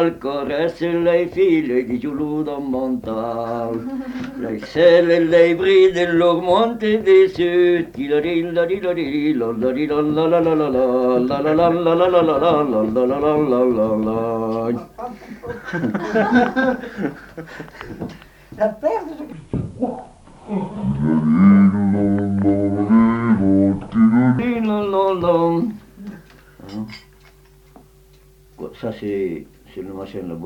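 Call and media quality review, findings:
Section at the wrong speed, 19.32 to 24.39 s: audio drops to 0.583x, pitch sinking about ten semitones, so everything turns deep and dragging. Likely an edit or playback stage running that stretch against the wrong clock, speed and pitch shifting together.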